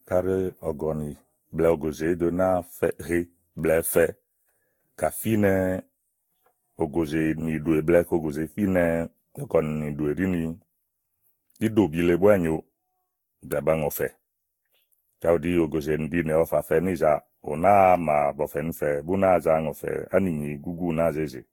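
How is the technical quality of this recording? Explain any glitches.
The speech is compromised throughout by generation loss. Across the recording it sounds swirly, smeared and hollow, with blurred consonant attacks and nothing above 19.1 kHz. The likely cause is repeated lossy re-encoding, roughly seven passes through a Vorbis-style codec at similar moderate bitrates. Each pass requantises on a shifted frame grid, so noise and spectral gaps accumulate.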